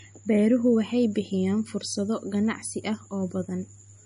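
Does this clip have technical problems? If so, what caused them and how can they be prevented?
Yes, two. The speech has nothing above 10.6 kHz throughout, and that hard ceiling plus the smeary, swirly texture points to low-bitrate audio saved at a high bitrate. The likely chain is an MP3 at something like 40 kbit/s that was later re-encoded as a 320 kbit/s MP3. The bigger file can't bring back what the first pass discarded, so the cut-off and artefacts stay. To prevent it, always encode from the original uncompressed source rather than from an existing lossy file.

There are also clock slip clicks running from about 0.16 s to 4.04 s. These are faint ticks about every 0.3 s, roughly 15 in all, most audible on louder voiced stretches. The likely cause is two devices on separate clocks with no sync, drifting apart by around 100 ppm, so a single sample gets dropped or repeated each time the error adds up to one sample. 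To prevent it, lock all devices to one shared word clock or use proper asynchronous sample-rate conversion between them.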